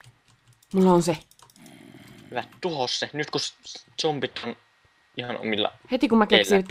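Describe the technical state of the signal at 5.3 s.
Right around there, from 5.24 to 5.30 s, there's a short concealed packet loss. About 40 ms of audio never arrived in time, so the decoder stretched the preceding sound to cover the gap and then blended back in. You hear it as a quick smear or wobble.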